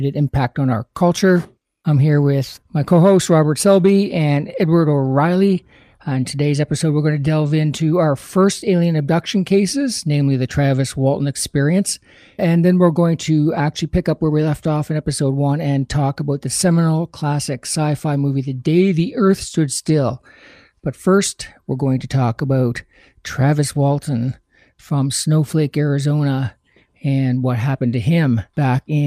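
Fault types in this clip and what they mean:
No technical faults are audible.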